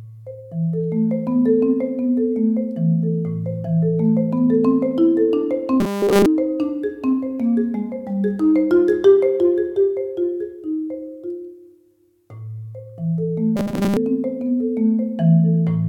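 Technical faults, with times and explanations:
5.80–6.26 s and 13.57–13.97 s: robotic sound from repeated short buffers. The sound hardens into a rigid, metallic 200 Hz buzz, total in the first stretch and covering most of the second. Likely cause: audio arriving too seldom, so a 5 ms fragment loops while real material is skipped.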